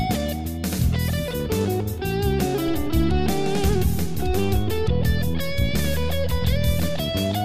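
A DC step shifts the audio's zero line at 2.68 s and holds until 6.99 s. The offset is about -26 dBFS. Each jump is heard as a low thump while the sound continues unchanged.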